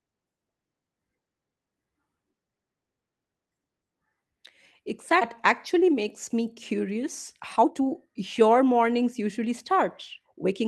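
In this speech clip, roughly a second of audio was dropped at 5.21 to 5.23 s and playback jumped straight to later material with nothing filled in. This skip ahead leaves an abrupt splice where the speech leaps forward mid-flow. Afterwards, jitter buffer speed-up trims short pitch-period slices repeatedly to shed excess delay: from 5.74 to 9.71 s playback runs at 113% speed, losing about half a second, and from 10.13 to 10.52 s at 111%, so the speech sounds hurried without any pitch change.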